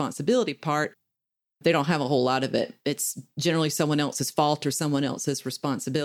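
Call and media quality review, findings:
Small skip forward at 0.85 s and a jump at 4.19 s, between "generally someone" and "fault or". Likely dropped buffer (overrun): capture samples overwritten before being read, losing a few ms, then roughly 20 ms, with the edges butted together.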